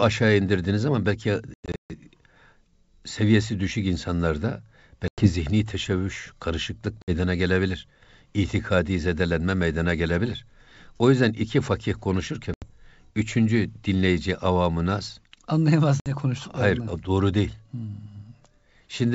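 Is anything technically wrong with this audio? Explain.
Yes. There is packet loss on an ADPCM call, carried over G.722 wideband coding at 64 kbit/s. Packets went missing and were replaced by silence, so the receiving decoder's adaptive predictor and step size drifted away from the sender's. The first episode, at 1.54 to 1.92 s, drops 280 ms in scattered holes across 360 ms, the longest about 140 ms, pointing to a burst of well over a dozen packets. Later single gaps fall at 5.08 to 5.29 s (100 ms, between "seviyesi düşük insanlarda" and "zihni teşebbüş karışıklık"), 7.02 to 7.11 s (60 ms, after "zihni teşebbüş karışıklık"), 12.54 to 12.70 s (80 ms, between "yüzden iki fakih konuşurken" and "üçüncü dinleyici avamı naz") and 16.00 to 16.11 s (60 ms). Each gap is a hard-edged hole in the speech. Afterwards the speech returns with brief distortion before settling within a few tens of milliseconds.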